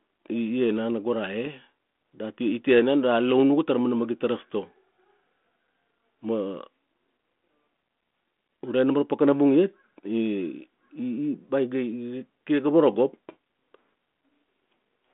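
Speech carried over a G.726 ADPCM link at 32 kbit/s, confined to a telephone band of roughly 200 Hz to 3.5 kHz with only light coding roughness, with no technical faults to report.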